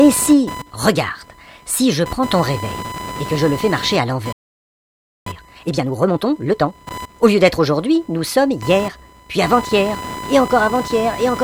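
Computer activity noise runs throughout: processor and peripheral load shifts the audio ground, adding a buzzing chirp pulsing near 1 kHz, about 15 dB below the sound.

From 4.32 to 5.27 s, a playback stall, likely the player starving for data or its thread being blocked, leaves the output silent for about 0.94 s mid-flow.

From 5.27 to 7.13 s, time-compressed catch-up trims the backlog by splicing out small pieces, so the audio runs 1.5 times fast at normal pitch.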